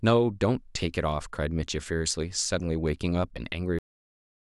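At 3.79 s the speech stops dead. This is a cut-off end. The final stretch of audio was never written out or played, so the recording ends partway through a sound. Nothing decays or fades. The signal drops straight to digital silence and stays there until the clip finishes at about 4.4 s. That leaves roughly two thirds of a second of empty audio. The sound is chopped off mid-syllable rather than brought to a natural close.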